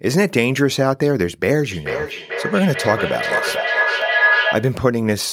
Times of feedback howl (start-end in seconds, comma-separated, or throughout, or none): 1.71-4.87